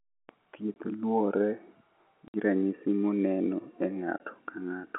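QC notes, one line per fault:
0.74 s, 2.28–2.34 s, 4.18–4.20 s: packet loss filled with silence. The speech drops into dead-silent holes with hard edges: about 20 ms at 0.74 s, 60 ms just before "ranyisi moneno e", and 20 ms right after "ranyisi moneno e". Lost packets were replaced with silence rather than concealed. The hole lengths fit 20 ms packets, one, three and one missing. The gaps sit within the narrowband telephone sound of the G.711 line.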